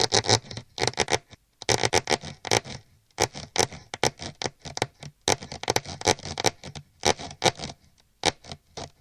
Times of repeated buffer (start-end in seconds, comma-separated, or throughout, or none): none